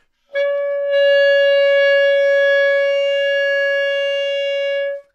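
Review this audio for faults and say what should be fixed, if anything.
No faults heard in these everyday sounds; nothing to fix.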